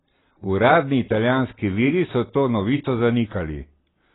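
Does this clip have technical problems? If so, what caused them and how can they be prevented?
Yes. Throughout, the speech sounds dull and smeared, with nothing above 3.9 kHz and a warbling, fizzy texture on sustained sounds and sibilants. The cause is likely heavy AAC compression: starved of bits, the AAC-LC encoder dropped the top band and coarsely quantised the rest, which fits a bitrate near 16 kbps. To prevent it, encode speech at 64 kbps or more, or keep an uncompressed master.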